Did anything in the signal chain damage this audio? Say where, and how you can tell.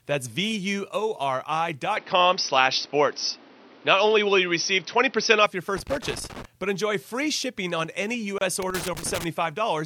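Yes. From 1.97 s to 5.46 s the speech sounds duller and boxier, and it has the character of an input switched to a poorer device, most likely a change at the capture stage to another microphone or a headset's call profile. The switch is made with no silence. Nothing is left above 6 kHz, the level shifts by about 5 dB, and a new noise floor sits about 30 dB below the speech. On a spectrogram the top band is sharply cut off for exactly that span, and the waveform's envelope steps in height at both edges.

Loose connector crackle, which is a fault in the analogue wiring, appears twice: from 5.77 to 6.45 s, just before "but enjoy free shipping", and again from 8.62 to 9.24 s. A worn or dirty contact makes and breaks irregularly, and this chops the signal into scratchy bursts. On the waveform these show as clusters of sharp spikes and dropouts at random spacing. On a spectrogram they are scattered vertical broadband streaks.

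There is a gap at a join of encoded pieces at 8.38 s, right after "free shipping on any". It is a hole of about 29 ms in continuous speech, and the sound resumes from where it stopped. At the codec stage, separately encoded segments were joined without trimming the encoder delay and padding. On a waveform this is a flat stretch with abrupt, slightly smeared edges. A spectrogram shows a thin blank column across all frequencies.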